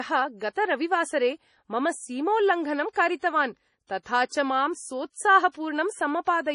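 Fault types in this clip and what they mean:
MP3 compression: the speech sounds watery and swirly, with s sounds turning metallic and nothing at all above 10.6 kHz. The likely cause is heavy MP3 encoding, which cuts the treble and drops weak frequency lines frame by frame, as fits a bitrate near 32 kbps.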